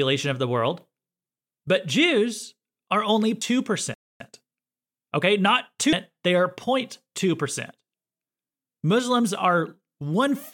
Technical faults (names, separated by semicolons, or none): damaged data in a compressed stream; playback stall; time-compressed catch-up